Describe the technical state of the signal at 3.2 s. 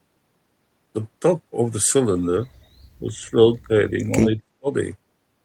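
At 3.2 s the speech dips by up to about 10 dB between 3.0 and 3.33 s, likely speech suppressed in double talk by an echo canceller, ducking rather than cutting out cleanly like a dropout.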